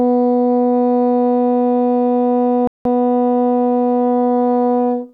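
A rebuffering stall interrupts the music from 2.67 to 2.85 s: playback ran short of downloaded audio and halted until more arrived. The sound drops to silence for about 179 ms, then picks up exactly where it stopped, losing nothing but adding time.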